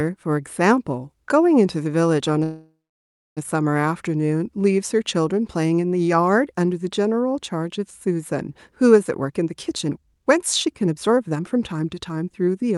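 A speech recording with two call faults. From 2.43 to 3.39 s there is a call audio freeze. The sound trails off and then goes silent for about 0.63 s. It resumes where it stopped, late by about 0.93 s. The likely cause is delayed packets draining the jitter buffer. From 9.21 to 12.77 s a jitter buffer speed-up plays the speech at 125% speed without changing its pitch. About a second of tiny pitch-period slices is cut, so it sounds hurried.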